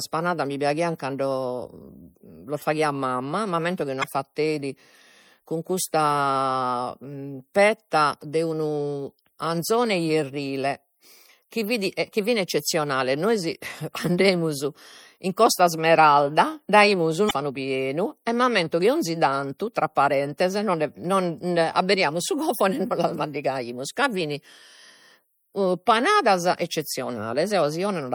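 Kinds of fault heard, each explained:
MP3 compression: Throughout the 28-second speech clip, the sound is plainly watery, with a swirling, metallic edge on sibilants. This is likely MP3 encoding at a bitrate that fits about 64 kbps. With so few bits, the encoder keeps discarding weak spectral detail from frame to frame, which produces the shifting, underwater texture.
Damaged data in a compressed stream: At 4.00 to 4.04 s, just after "faghiat mamma m'ammento chi", and again at 17.27 to 17.31 s, there is a brief glitch about 40 ms long. Part of the compressed data arriving at the decoder was wrong. The decoder misread those frames, lost its place in the stream and had to find the next valid frame header before playback could continue.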